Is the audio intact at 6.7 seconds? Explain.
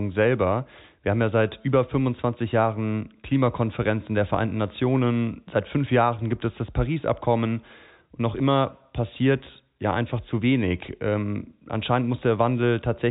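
Yes, at 6.7 seconds the audio is intact, with no dropout, click or distortion, only the narrow telephone band of G.711 telephone coding with nothing above about 3.8 kHz.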